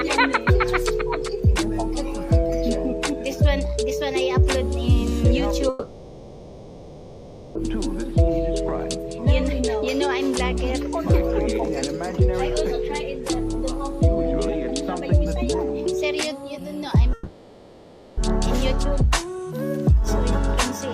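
At 5.69 s the sound breaks off and a smeared buzz takes its place. It fades. That fill runs for 1.86 s, until 7.57 s. The same happens from 17.13 s to 18.19 s, for 1.04 s. Each is a long network dropout, where the likely cause is packets that never arrived. The receiver stretched the last sound to cover the hole. The lost audio is gone, and playback resumes further on.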